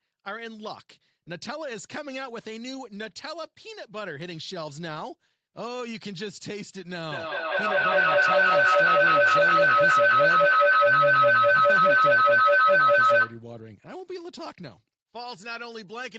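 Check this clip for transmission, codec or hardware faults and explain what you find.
There is one fault, a feedback howl. From 7.11 s to 13.5 s, a tone near 1.5 kHz builds to about 15 dB above the speech. The loop repeats roughly every fifth of a second. Two devices in one room share the call. Each pass from loudspeaker to microphone adds level. The loop narrows to the frequency it favours. Nothing above 8 kHz is heard, which fits a wideband Opus setting on the call path.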